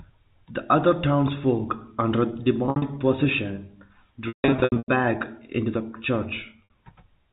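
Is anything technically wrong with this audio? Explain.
Yes. Packet loss with pitch repetition occurs after "other townsfolk under" at 2.66–2.82 s (120 ms lost, longest run 60 ms), at 4.28–4.88 s (440 ms lost, runs up to 160 ms), and at 6.64–6.70 s (60 ms). The receiver fills each gap by repeating the last pitch period, so short gaps sound like a brief buzzy hold. The 160 ms run fades to silence before the speech cross-fades back. That held tone, rather than an abrupt silent hole, separates it from plain dropouts.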